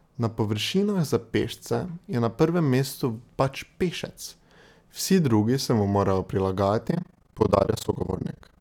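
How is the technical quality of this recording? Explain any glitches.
The speech has one clear fault near the end. From 6.88 s to the end there is overlap-add ripple. Frames were rejoined with overlaps that don't sum evenly. Level swings about 60 dB, around 30 times a second. It sounds like a harsh, robotic flutter.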